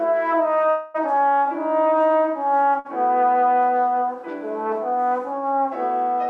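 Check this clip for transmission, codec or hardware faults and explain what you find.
Two transmission faults are audible, both gaps inserted into the sound rather than pieces lost from it.

From 0.70 to 0.96 s there is a call audio freeze: the last sound carries on as a fading buzz for about 0.24 s and then resumes where it stopped. The likely cause is packets held up in transit until the jitter buffer emptied. Its length is what separates it from a brief stall.

At 2.79 to 2.87 s a short stall from a late packet holds one sound for about 54 ms with a slight buzz. The jitter buffer ran dry, and the receiver stretched that sound until the packet arrived. It is too brief to fade the way the freeze does.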